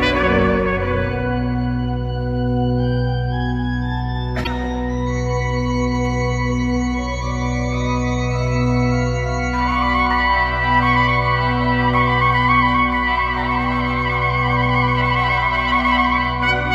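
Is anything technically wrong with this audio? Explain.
Yes. From 4.43 to 4.47 s there is a brief garbled glitch with a skip forward, likely a broken MP3 bit reservoir: after dropped frames (about 26 ms each), the decoder reads another frame's bytes.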